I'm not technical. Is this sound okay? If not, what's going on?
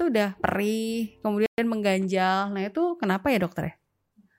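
No. At 1.46 s the speech goes completely silent for 120 ms, until 1.58 s, then resumes. This is a playback stall, likely the player briefly running out of data. Unlike a natural pause, it cuts off mid-sound, and it lasts longer than a tiny click-like dropout.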